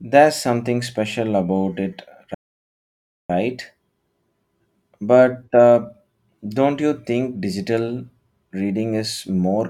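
At 2.34 s the speech cuts off abruptly in mid-flow and the output stays silent until 3.30 s, a playback stall of about 0.95 s. The likely cause is the player running out of data or its thread being blocked. Unlike a natural pause, the silence interrupts sound already under way.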